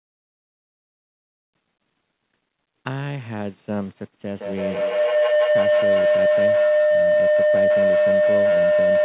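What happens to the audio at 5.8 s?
At 5.8 s a tone near 700 Hz is swelling over the speech, with repeats roughly every 150 ms, climbing to about 11 dB above the talker. It is feedback howl, running from 4.28 s to the end of the clip. Two devices on the same call share a room, so each pass from loudspeaker back into microphone comes out louder. The loop's favoured frequency wins out, and its round-trip delay sets the spacing of the repeats.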